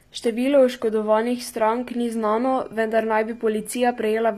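Throughout the speech, the upper band sounds synthetic. Nothing remains above 14.9 kHz, and the codec damage is plainly audible, with s sounds turning gritty or lispy. The likely cause is HE-AAC compression at a low rate, which fits about 24 kbps. Unlike plain lowpassing, the treble is still present but rebuilt from lower bands, so its harmonics don't line up.

From 1.40 s to the end, a switching supply whistle appears: a high tone wandering between about 2.38 and 2.50 kHz, roughly 45 dB below the speech. Its pitch drifts instead of holding fixed, which separates it from a steady test tone or mains hum.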